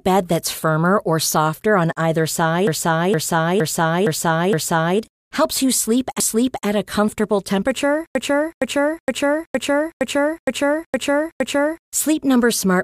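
Repeated frames make the speech stutter at 2.67 to 4.99 s (five extra plays), 6.20 to 6.67 s (one) and 8.15 to 11.87 s (eight). The same 0.46 s block, which fits five compressed frames, replays identically, unlike an echo, which would fade.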